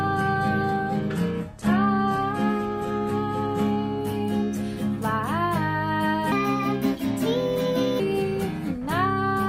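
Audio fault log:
0.0 to 4.0 s, adaptive stream starting at a low bitrate: the opening sounds thin and a bit smeary, with the treble missing or feeling synthetic, plus heavier codec artefacts. That points to the player grabbing a very low-bitrate HE-AAC rendition, something around 16 kbit/s, so it could start fast. At 4.0 s it switches to a proper AAC-LC stream, roughly 96 kbit/s, and the detail snaps back in with no gap at all.
6.32 to 8.0 s, section at the wrong speed: this stretch runs 1.29 times too fast, so everything turns hurried and jumps up by about four semitones, with speed and pitch shifting together and then dropping back just as abruptly. You don't get that from a pitch shifter on its own. The likely cause is an editor or player fitting that piece of audio to the wrong clock, so the samples just go by quicker than they were recorded.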